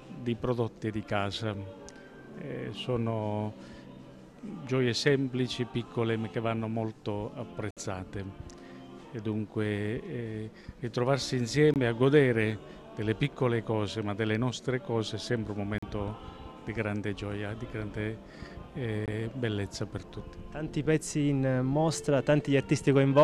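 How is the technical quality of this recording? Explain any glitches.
The recording has four short gaps where the audio cuts to silence, at 7.71–7.77 s (about 61 ms), 11.74–11.76 s (20 ms), 15.78–15.83 s (41 ms) and 19.06–19.08 s (20 ms). Each hole has abrupt edges or a fade of a few milliseconds, and the sound resumes further along, as if it kept playing unheard. These are likely Bluetooth dropouts, where wireless packets arrived too late and were discarded. The gap lengths, all multiples of about 20 ms, fit the loss of one to three packets at a time.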